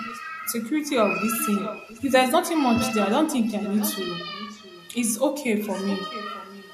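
Echo leak recurs through the speech clip: a copy of the voice trailing about 0.66 s behind at 0.04–0.23, 1.42–2.13, 2.8–3.06, 3.25–4.09, 4.27–5.17 and 5.57–6.73 s. It's mostly quiet, strongest near 2.8 s. Likely a far-end loudspeaker whose echo canceller let some through.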